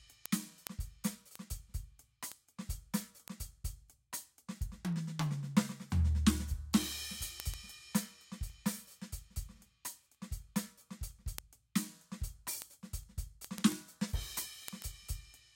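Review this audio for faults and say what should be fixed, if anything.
Word clock ticks run through the whole music clip, from 0.12 s to 15.51 s, about every 0.15 s, roughly a hundred in all. The receiving device is free-running rather than locked to the sender's clock, which points to an error of around 150 ppm. Each time the two clocks slip past each other, one sample is dropped or repeated, producing a steady train of clicks. To prevent this, lock the receiver to the incoming digital signal or distribute one shared word clock to both devices.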